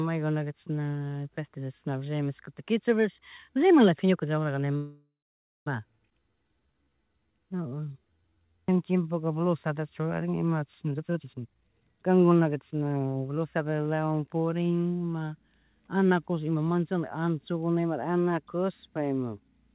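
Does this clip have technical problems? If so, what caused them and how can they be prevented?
Yes, the clip has four distinct faults. The speech is limited to nothing above 4 kHz, which fits a G.711-style narrowband call codec.

Call audio freeze, 4.76 to 5.69 s: The speech stops and the last sound is stretched into a fading buzz that ends in about 0.53 s of silence. Then the audio resumes where it left off, so about 0.9 s has been inserted and nothing is lost. The likely cause is packets stalling in transit while the jitter buffer ran dry. On a spectrogram this shows as a smeared, decaying copy of the preceding spectrum, then a blank column. The waveform shows a shrinking tail and a flat line. More stable network routing and a larger jitter buffer target would prevent it.

Skip ahead, 6.10 to 6.14 s: Playback jumps forward with almost no gap, and roughly half a second of speech is missing. 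The two sides are joined nearly directly. Packets were dropped, or discarded when the buffer overflowed, while later audio was already queued. A spectrogram shows an abrupt discontinuity in formant tracks with no silence between. The waveform shows a sudden change in envelope at a single point. Reducing packet loss and sizing the buffer to absorb bursts would prevent it.

Jitter buffer slow-down, 6.19 to 9.09 s, ending just before "blusata churarina ima": The speech plays at about 84% speed with unchanged pitch. Sounds are drawn out. The receiver repeated single pitch periods and pieces of pauses to rebuild its reserve, adding about 0.48 s in total. On a spectrogram, harmonics and formants are stretched horizontally with repeated, evenly spaced pulses. The waveform shows identical cycles copied in runs. A steadier packet arrival rate would avoid this refilling.

Jitter buffer speed-up, 10.88 to 13.87 s, just after "blusata churarina ima": The speech runs at about 130% speed with the same pitch and sounds hurried. 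The buffer was holding too much audio, so the receiver cut out short chunks of one or a few pitch periods repeatedly, removing roughly a second overall. A spectrogram shows compressed formant transitions and shortened pauses. The waveform shows clipped-off cycles and tightened gaps. Smoother network delivery that avoids bunched packet arrivals would prevent it.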